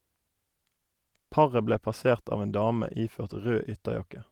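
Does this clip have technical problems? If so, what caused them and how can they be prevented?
Yes. At 1.73 to 1.75 s and again at 2.81 to 2.83 s, the speech lost a packet in transit, each time about 20 ms of audio, which fits a single Opus frame. The next packet carried a low-bitrate backup copy, so the decoder rebuilt the missing stretch from that copy instead of leaving a gap. This is a lost packet rebuilt from error correction: there is no dropout, but each 20 ms patch sounds briefly rougher and noisier than the audio around it. Reducing packet loss on the network path, for example with a steadier connection or traffic prioritisation for the call, would prevent these patches.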